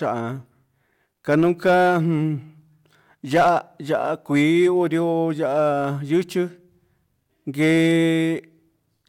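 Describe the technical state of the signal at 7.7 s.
Hard clipping runs from 7.62 to 7.99 s, covering the moment at 7.7 s. Over this span the speech is driven about 3 dB past the ceiling of a stage in the chain, so the peaks are cut off flat instead of following their natural curve. Those squared-off tops add harmonics high in the spectrum, heard as a brief crackle on the loudest moments of the speech rather than a continuous fuzz, given the modest overload.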